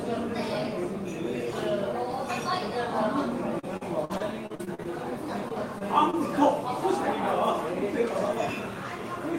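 An everyday-sounds recording that turns choppy and robotic from 3.59 to 4.86 s, with pieces missing. This is repeated packet loss: nine gaps, the longest 47 ms, were patched by extending the preceding sound, covering about 22% of that stretch. Brief smears or wobbles follow at 5.48–5.53 s, 5.79–5.82 s and 6.10–6.15 s. Each is a short concealed packet loss, where roughly 20 ms never arrived and the decoder continued the last sound before blending back. Within that last one, 6.13–6.15 s sounds rougher and noisier. That is a lost packet rebuilt from error correction, played from the low-bitrate copy carried in the following packet.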